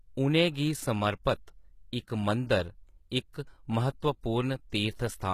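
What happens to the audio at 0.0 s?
From the very start at 0.0 s, the speech carries plainly audible damage that runs through the whole clip, most likely from HE-AAC compression. Only the lower spectrum is properly coded. The treble is rebuilt by copying lower bands upward under a coarse envelope, so the high harmonics don't line up with the real ones, and s sounds come out gritty and lispy. That fits a very low bitrate, around 20 kbps. Unlike a plain low-pass, the top stays bright up to a ceiling near 14.9 kHz, but what fills it is synthetic.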